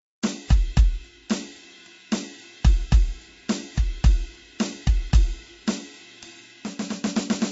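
The music stops at 7.6 kHz throughout, with swirly MP3 smearing a plain low-pass filter wouldn't leave: likely low-bitrate audio saved at a high bitrate.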